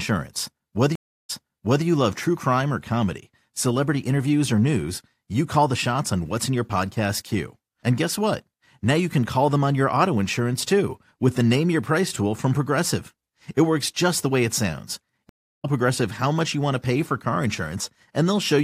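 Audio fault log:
0.95–1.85 s: stream reconnect. The connection drops, the sound stops for about 340 ms, and a fresh decoder picks up 0.56 s earlier, so a stretch is heard twice as the server resends a burst. The repeat and the fade-in of the restarted decoder set it apart from a plain dropout, which resumes where it left off.
15.29–15.66 s: stream reconnect. There is a similar silence of about 340 ms, but the audio resumes roughly 0.3 s later, so a short piece is skipped rather than repeated.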